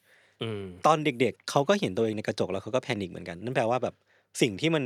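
Nothing in the recording stood out as a technical problem on listening.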